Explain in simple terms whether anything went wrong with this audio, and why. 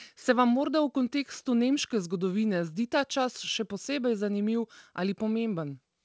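Nothing stood out on listening: the speech has come through an ordinary internet call connection, which leaves out the very highest sounds above 8 kHz, as such calls normally do.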